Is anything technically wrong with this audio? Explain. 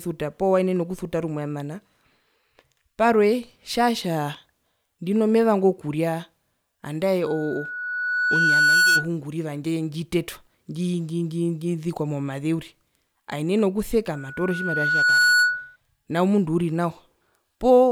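Yes. Loudspeaker feedback squeal occurs twice in this speech, from 7.26 to 9.08 s and from 14.14 to 15.76 s. A microphone hears its own loudspeaker, and the loop runs away at 1.5 kHz. Each time a pure tone swells, over about 1.5 s the first time and about a second the second, ending a little louder than the speech.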